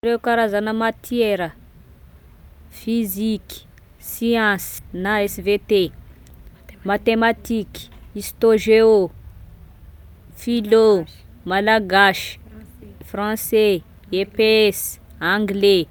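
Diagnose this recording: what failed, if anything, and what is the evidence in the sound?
A skip ahead at 4.78 s in this speech: the audio jumps forward with no gap, and roughly 300 ms of sound is missing, the two sides spliced almost directly. This points to the network or jitter buffer discarding a queued stretch, likely through buffer overflow, to cut delay.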